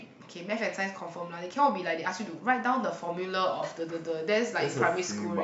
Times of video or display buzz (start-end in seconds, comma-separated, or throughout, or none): 2.47-5.17